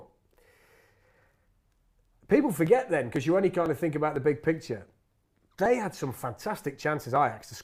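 Speech, with periodic USB or driver dropouts running from about 0.17 s to 7.16 s: roughly every 0.5 s a sliver of around a millisecond gets skipped outright, so you hear a steady run of small ticks, about fifteen of them, that show up only where there's signal.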